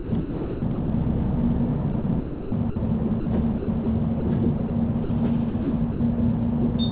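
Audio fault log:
0.00–0.88, 1.92–2.76, 3.58–3.86, 4.58–4.70 and 5.50–6.00 s: sound chopped by the voice detector. Within each stretch, pieces of the sound are swapped for comfort noise, adding up to about 600, 420, 120, 40 and 200 ms. The likely cause is a sender's detector toggling transmission on and off. It sounds choppy. On a spectrogram, textured segments alternate with flat, featureless noise blocks, all capped near 4 kHz as expected from narrowband G.711. The waveform shows abrupt envelope steps at each switch.
3.20–3.26, 4.20–4.22 and 5.04–5.10 s: sound dropped by the voice detector. Brief portions of quiet sound, about 60, 20 and 50 ms, were judged to be background and not sent. Steady comfort noise fills each gap until transmission resumes, likely because the sender's detector missed the low-level sound. The sound briefly gives way to a smooth hiss before returning. On a spectrogram, each gap is a narrow, uniform noise band with no structure, and the waveform flattens to a constant low-level fill.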